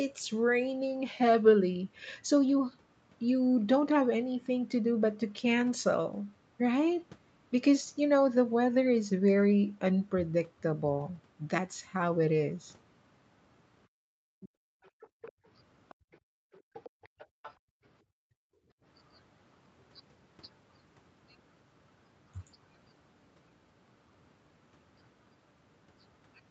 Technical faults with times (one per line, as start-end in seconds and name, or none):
13.88-15.45 background gated by the echo canceller
14.41-14.49 other side's voice leaking through
14.84-15.32 other side's voice leaking through
15.89-16.17 other side's voice leaking through
15.95-17.84 background gated by the echo canceller
16.53-17.54 other side's voice leaking through
18.12-18.21 speech suppressed in double talk
18.49-18.83 background gated by the echo canceller